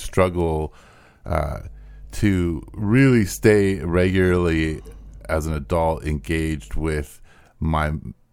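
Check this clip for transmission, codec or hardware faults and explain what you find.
Mains hum runs from 1.37 s to 6.75 s, the one fault in this speech clip. The power line is leaking into the signal path, through a ground loop or through induction from a nearby transformer, and it adds a steady low tone at 50 Hz. That frequency points to equipment on a 50 Hz supply. The hum sits roughly 20 dB below the speech.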